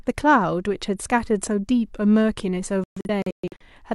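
A digital broadcast dropout runs from 2.84 s to 3.66 s: the receiver stopped getting decodable frames and muted its output each time one went missing or failed its check. The speech breaks into several short silent holes rather than one gap, totalling about 427 ms of lost audio spread across roughly 768 ms, with the longest hole lasting 128 ms. The pattern points to about ten frames dropped, and whatever was broadcast in those holes never returns.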